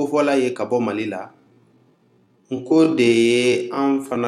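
At 1.28 s the pace suddenly drops, and the rest of the audio stays slowed to about 0.61 times normal speed. Pitch does not fall with it. This is a time-stretched section, likely from software lengthening the audio by repeating short pieces. It sounds dragging.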